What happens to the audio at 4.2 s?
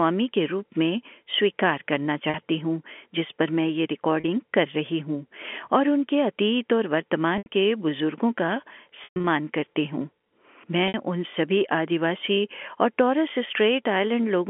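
At 4.20 s there is packet loss with pitch repetition, lasting 40 ms until 4.24 s, which fits two lost 20 ms packets. The receiver bridges the gap by repeating the last pitch period. The speech briefly sounds held and slightly buzzy before resuming.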